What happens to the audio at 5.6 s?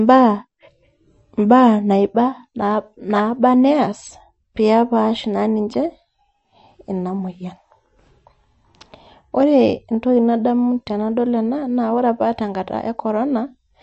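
At 5.6 s the speech carries MP3 compression damage, as it does through the whole clip. Nothing is heard above 8.1 kHz, so the top is dull and the s sounds lose their edge. Weak frequency lines drop in and out between frames, giving a watery, swirly texture and metallic chirps. The likely cause is an encoder short of bits. The damage is plainly audible and points to a low bitrate near 39 kbps.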